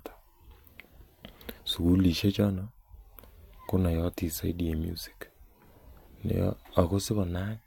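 No technical faults can be heard anywhere in the speech recording; the signal stays continuous and steady throughout.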